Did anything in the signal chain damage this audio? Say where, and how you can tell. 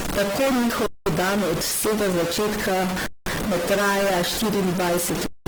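Yes. Distortion runs through the whole speech clip, and the pauses are filled with noise instead of silence. This points to a converter or digital line. The likely cause is a stuck bit, where one bit holds a fixed value and offsets about half the samples.

The codec stage also left damage throughout. Voiced sound is rough, grainy and noisy, and the damage is plainly audible. Bandwidth stays full, up to 20.2 kHz. This is likely Opus compression in its music (CELT) mode, starved of bits at roughly 16 kbps.

Playback or transport adds a gap between chunks. There are silences of 200 ms at 0.86–1.06 s, 3.06–3.26 s and 5.26–5.46 s. The first comes just before "dan od vsega začetka", and the second between that phrase and "ne traja". They recur every 2.2 s, matching 2-second chunks joined with silence.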